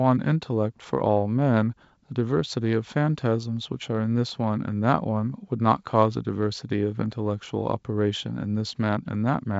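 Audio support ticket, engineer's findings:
No faults found in speech.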